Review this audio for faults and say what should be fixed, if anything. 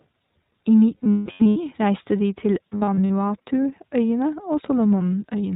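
The whole clip carries plainly audible iLBC codec damage. The speech sounds slightly rough and synthetic, and a spectrogram shows nothing above 4 kHz. The roughness fits iLBC's 20 ms frames, each coded on its own, at a rate near 15.2 kbps. To prevent it, use a wideband codec wherever the link allows one.

There are lost iLBC frames from 0.96 to 1.56 s, about 420 ms missing, with the longest run about a fifth of a second. Another burst runs from 2.71 to 3.10 s, about 200 ms missing in very short runs. Each gap is filled with a repeated pitch cycle mixed with noise, which sounds like a held, buzzy vowel. On a spectrogram, the harmonics flatten into static stripes, and the waveform shows repeating periods that fade. Because each frame stands alone, the speech recovers straight after each gap. To prevent it, reduce packet loss with a larger jitter buffer, forward error correction or redundant packets.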